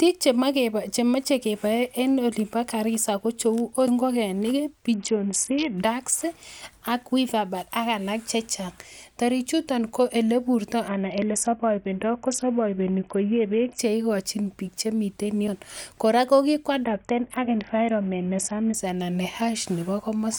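At 3.87 s the speech jumps: about a fifth of a second is gone and the two sides butt together with no silence, so the sound lurches forward. The same skip returns at 9.68 s, roughly six seconds later. That spacing points to audio missing between chunks, likely from a recorder handling the stream in 6 s blocks and dropping a slice at each handover.

From 4.94 to 5.78 s, 10.88 to 13.79 s and 16.85 to 18.74 s, the Bluetooth link shows an SBC bit pool drop. The bit pool falls from 31 to 6, around 55 kbps, so the encoder has almost nothing to spend on the upper sub-bands and quantises the rest coarsely. The speech turns dull and muffled, with a gritty, granular noise riding on it, and clears when the rate climbs back.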